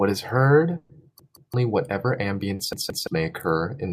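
At 0.77 s there's a burst of packet loss running to about 0.91 s. Roughly 120 ms of the call never made it in time, so the receiver kept extending the last bit of sound and fading it down across the hole. You hear a held buzz or a fading hiss rather than silence, and then the speech picks up further along, with those 120 ms simply gone.

From 1.20 to 1.54 s comes the first repeated buffer. The playback side ran dry and replayed its last chunk, about 171 ms long, which fits an 8192-sample buffer at 48 kHz. It played twice more after the original, so the same slice sounds three times with a hard seam at each join. That's a short stutter, and a bit over a quarter of a second of real speech gets skipped past.

At 2.55 s there's a short concealed packet loss, lasting to 2.61 s. About 40 ms went missing, and the decoder papered over it by carrying the previous sound forward and blending back in. 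It's more a quick smear or wobble than a gap.

Right after, from 2.73 to 3.07 s, the repeated buffer happens again the same way. The same roughly 171 ms chunk is heard three times with hard joins, so you get another stutter and again around a third of a second of speech is lost.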